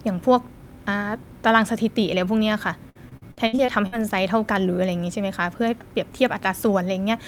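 Repeated packet loss (robotic sound) affects this speech from 2.89 to 4.06 s. Eight gaps, the longest 59 ms, are each bridged by extending the preceding sound, so about 30% of that stretch is concealment, giving choppy speech with pieces missing.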